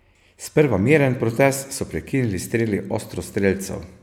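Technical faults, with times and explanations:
No technical faults can be heard, so there are no times or explanations to give.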